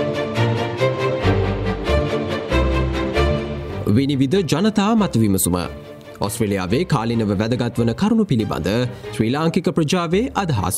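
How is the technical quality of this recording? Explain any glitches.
No glitches can be heard, and the technical quality of this recording holds steady throughout.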